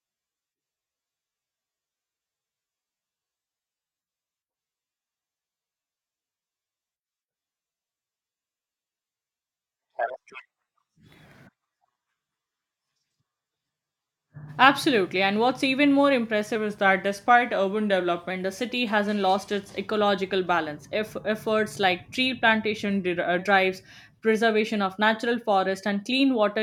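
Drift correction steps occur at 10.08 to 11.26 s, 16.56 to 18.30 s and 22.85 to 23.39 s. The speech speeds up 6.44% and rises about 108 cents in the first, then slows 6.44% and drops about 115 cents in the other two. Each is heard as an abrupt semitone detuning. This likely comes from clock-matching software changing playback rate in one jump to refill or drain its buffer.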